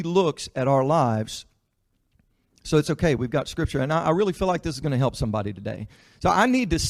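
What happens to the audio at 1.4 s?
Nothing goes wrong at 1.4 s; the speech there runs on cleanly, with no dropout, click, glitch or other audible fault.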